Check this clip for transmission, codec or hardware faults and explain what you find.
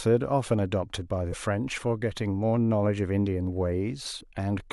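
Two short glitches in this speech, both damaged data in a compressed stream: one from 1.29 to 1.35 s, another from 4.17 to 4.22 s. Bad bytes there made the decoder misread frames and hunt for sync, so each comes out as a brief blip.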